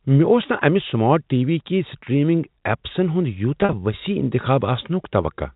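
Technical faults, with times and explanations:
3.61–3.73 s, packet loss with pitch repetition: about 70 ms of audio went missing in short gaps spread over 120 ms, none longer than 40 ms. The receiver looped the last pitch period across each gap, so the sound briefly holds with a slightly buzzy quality.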